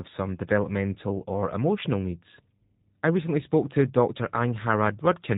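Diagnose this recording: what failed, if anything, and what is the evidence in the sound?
Codec stage: G.729 coding throughout, with nothing above 4 kHz and a rough, synthetic buzz on the speech. That points to about 8 kbit/s pulse-excited synthesis.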